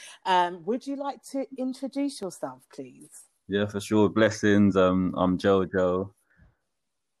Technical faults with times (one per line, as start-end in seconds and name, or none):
0.19-6.31 clock drift buffer slips